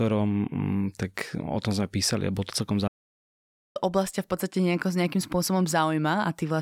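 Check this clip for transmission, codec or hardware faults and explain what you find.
One fault stands out in this speech. A playback stall runs from 2.87 s to 3.77 s, right after "a bolo to celkom". The player likely ran short of data or had its output thread held up, so it produced nothing for 0.88 s until it recovered. What you hear is the speech breaking off mid-flow into a clear stretch of silence, then carrying on with "oblasť v podstate".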